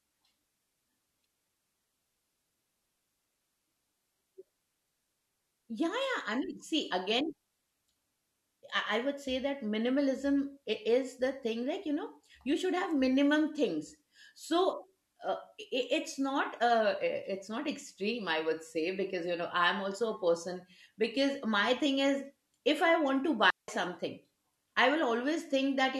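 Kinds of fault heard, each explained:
Digital wireless dropout: the radio link lost too much data, so the receiver muted with a very short fade, leaving a clean hole of near silence from 23.50 to 23.68 s, about 180 ms, right after "want to", with no noise burst either side.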